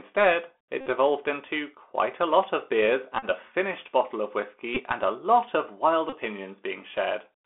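Speech, heard throughout through a Bluetooth CVSD headset codec. The band runs only from 250 Hz to 3.5 kHz. The codec damage is plainly audible: a granular hiss sits under the speech, s sounds turn scratchy, and loud high sounds distort. That fits a 64 kbps CVSD link, whose one-bit adaptive steps cannot keep up with fast changes. Bluetooth headset packet repeats break in four times: 0.81 to 0.87 s, 3.19 to 3.25 s, 4.75 to 4.80 s, and 6.09 to 6.15 s. Each is a short buzz near 267 Hz. Lost packets were replaced by decoding the previous packet's bits again, repeated every 3.75 ms.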